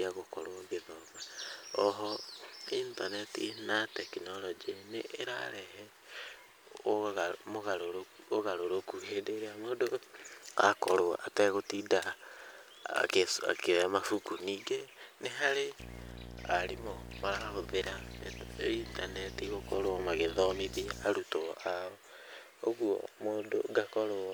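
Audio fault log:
15.79–21.04 s, video or display buzz: a screen or video cable is coupling its picture-refresh energy into the audio path, so each 60 Hz field leaks into the signal as a short pulse. That repetition is heard as a harsh buzz at 60 Hz, with a layer of fizzy hash riding above it from the pulses' sharp edges, sitting fairly loud, roughly 10 dB under the speech, for these five seconds before it stops.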